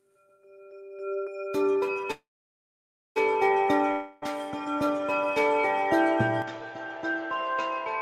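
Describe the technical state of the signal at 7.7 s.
At 7.7 s the sound is dull, with nothing above 7.6 kHz, from 6.42 s to the end. Input likely switched to a poorer device. Level drops by about 5 dB, with new noise underneath.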